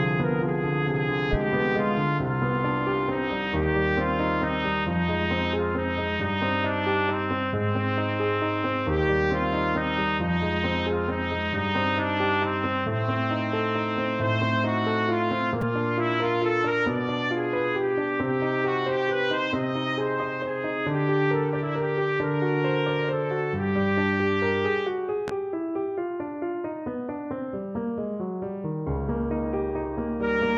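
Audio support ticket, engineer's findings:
Repeated buffer at 15.61 s. Quick stutter, really more a click with a tiny buzz, since the same sliver of sound plays three times back to back with hard joins. Each repeat is about 5 ms, so it fits a very small playback buffer. Device missed its deadline, replayed the last block twice, and we lose about 10 ms of real audio. Underrun on the output side, worth checking buffer headroom.

Loud pop, 25.28 to 25.32 s. One sharp pop sitting on top of the sound, peaking roughly 10 dB over the programme level, with the audio carrying on underneath. A voltage step or pulse got into the chain and the downstream stages shaped it into that short thump. Likely a plug, switch or static discharge, or a driver glitch. Check connections and cabling first.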